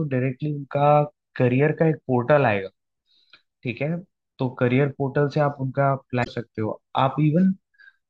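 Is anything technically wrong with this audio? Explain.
Yes. From 6.21 to 6.28 s a short glitch breaks into the speech, caused by damaged data in a compressed stream: corrupted bytes made the decoder misread frames and lose sync until the next frame header.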